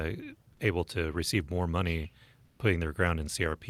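From 2.45 to 2.59 s, just after "to receive more money", comfort noise replaces the background for 140 ms, likely from discontinuous transmission muting the sender. A smooth synthetic hiss about 6 dB quieter appears, shown as a flat, textureless spectrogram band and an even, lower waveform envelope.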